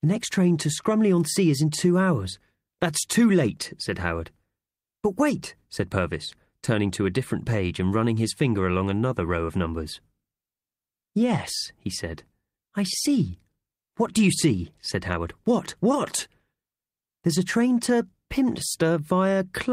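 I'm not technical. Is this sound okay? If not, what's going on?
Yes, nothing wrong can be heard anywhere in this speech recording.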